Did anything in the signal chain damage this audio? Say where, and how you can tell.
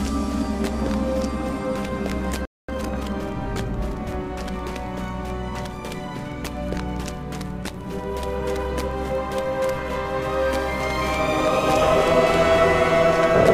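Yes. At the playback stage, a playback stall silences the sound from 2.45 to 2.68 s, likely a starved buffer.

Time-compressed catch-up follows from 2.68 to 3.14 s. Cross-faded cuts hurry the sound at 1.5x with unchanged pitch, unlike a resampling speed-up.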